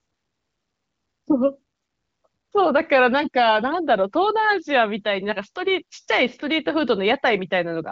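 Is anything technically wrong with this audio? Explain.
No, nothing technically wrong stood out when listening to this speech clip.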